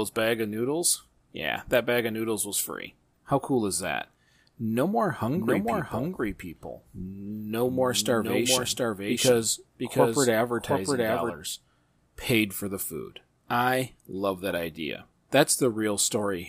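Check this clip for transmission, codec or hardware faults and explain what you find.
One fault is present, a doubled audio track, from 5.37 s to 11.33 s. The speech is shadowed by a second copy about 5 dB quieter, trailing by under a second, with no reverb tail, cutting in and out abruptly. It is likely a second capture path or misaligned edit mixing the same audio twice.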